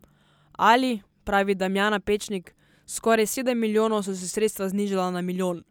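No technical faults can be heard in the speech at any point; the signal stays continuous and steady throughout.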